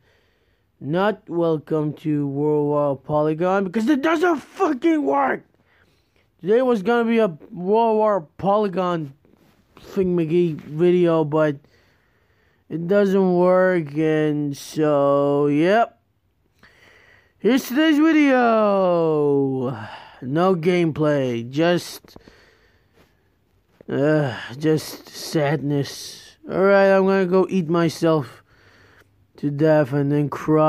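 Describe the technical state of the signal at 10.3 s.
At 10.29 s the signal has a block of digital silence lasting about 0.73 ms, which fits a run of 32 samples set to zero. The waveform drops straight to silence and back with no fade, so both edges are sharp discontinuities. Because the gap is so brief, it is heard as a single tick. A waveform shows a tiny flat stretch of silence, and a spectrogram shows a thin vertical broadband streak.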